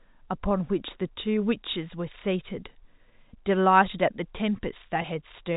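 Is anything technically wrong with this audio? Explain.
Yes. At 5.02 s there is packet loss with pitch repetition lasting about 20 ms, which fits a single lost packet. The receiver bridged the gap by repeating the last pitch period, so the sound briefly holds with a slightly buzzy quality before continuing. The telephone-band G.711 coding removes everything above 4 kHz.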